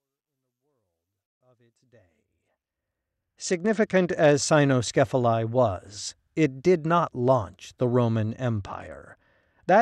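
A speech clip suffers two Bluetooth SBC bit pool drops, where a congested wireless link forced the codec to shrink its bit allocation, which fits a fall from a bit pool of 28 to about 10, near 84 kbps. Starved of bits, the upper sub-bands get few or no bits and the rest are coarsely quantised, so the treble dulls and gritty noise rises from 2.20 to 4.34 s, just after "the world of its", and again from 8.56 s to the end. The smooth fade-in over the opening seconds can be heard underneath the first drop.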